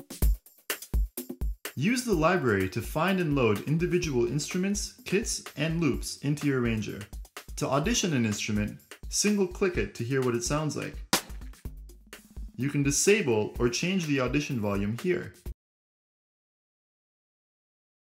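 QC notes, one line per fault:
15.52 s to end: audio dropout to silence. The sound stops abruptly mid-flow at 15.52 s and does not return; the remaining 2.5 s contain silence with no room tone or noise floor. That absence of any background is what separates it from a quiet passage: the input signal was lost, likely through a disconnected device, failed link or unintended mute, while the recorder kept writing silence. Whatever occurred after the cut is not recoverable.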